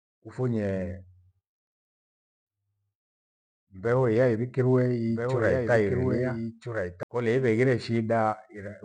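From 5.07 s to 7.03 s a doubled audio track appears: a full-band second copy of the speech, somewhat quieter, runs about a second and a half behind, dry and without room colour, starting and stopping abruptly. This is likely a second capture path or out-of-step edit.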